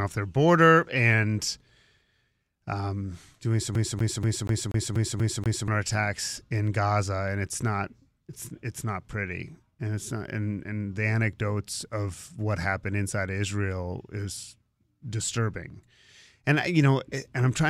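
At 3.75 s, right after "um doing some", the speech locks into a CD stuck on one turn until 5.68 s: the laser keeps jumping back to the same damaged spot, so a 241 ms slice repeats eight times with a brief mute at each jump. The fixed loop length and machine-even rhythm set it apart from a network or buffer dropout, where gaps and repeats fall irregularly.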